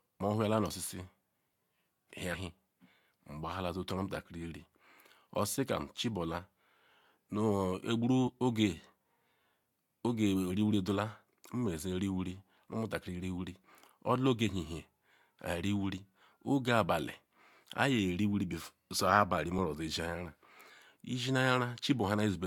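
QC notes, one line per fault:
2.33 s, 8.27–8.29 s, 19.58 s: compressed frames skipped. Whole compressed frames never play, so the speech jumps ahead, by about 150 ms at the first two points and about 15 ms at the last.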